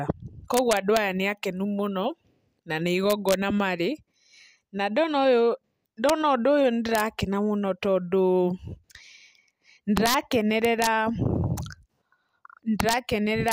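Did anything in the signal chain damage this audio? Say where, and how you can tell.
Yes. Integer overflow damaged the loud passages at 0.54–0.97 s, 3.10–3.34 s, 6.09 s, 6.95–7.00 s, 9.97–10.14 s, 10.65–10.87 s, 12.80–12.93 s and 13.48–13.52 s. Each is a violent crack, far harsher than clipping, even though the peaks exceed full scale by only about 0 to 2 dB. That points to a fixed-point gain or sample-format conversion stage. It let the sum wrap to the opposite sign instead of saturating, so every over-limit peak flips across the whole range.

A separate buffering or write fault shows as chunks out of order at 12.48–12.56 s. A block that fits a 40 ms chunk arrives one position late and plays after the one that should follow it. No audio is missing, but the speech sounds briefly jumbled across three hard joins. That pattern suggests a driver or storage buffer committing blocks in the wrong sequence.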